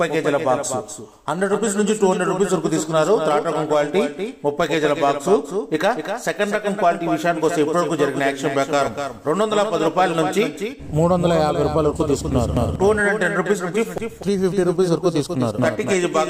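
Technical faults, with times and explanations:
Throughout, doubled audio track: a second full-band copy of the sound trails the original by about 300 ms at roughly 5 dB lower, with no decay or room colour. The likely cause is a second capture through a slower path or two misaligned copies in an edit.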